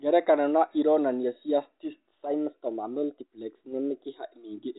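At 2.10 s, just after "na ironania cia", a small blip breaks into the speech. This is packet loss with the last packet repeated. One packet, about 20 ms of audio, never arrived, so the receiver replayed the previous packet to fill the gap. The replayed piece seldom lines up with the pitch cycle of the voice. Only one packet was lost, so the blip stays short instead of building into a buzz.

From 2.26 s to 4.34 s the speech suddenly runs faster and sits higher in pitch. The rise is about 107 cents, slightly more than a semitone, and the speed-up is 6.4%. At 4.34 s both snap back to normal. Speed and pitch moving together like this point to a drift correction step. The likely cause is clock-matching software changing the playback rate in a single jump to rebalance its buffer. Because it is a step rather than a gradual glide, the detuning is abrupt. It is easiest to hear on sustained vowels, which carry the narrow, sub-4 kHz band of the telephone coding.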